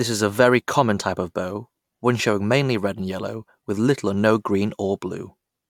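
Speech recording, with no technical faults to report.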